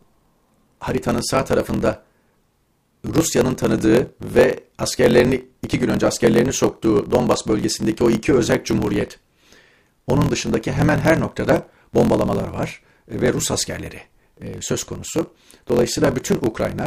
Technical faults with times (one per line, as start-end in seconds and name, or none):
0.00-16.87 block size mismatch (truncated)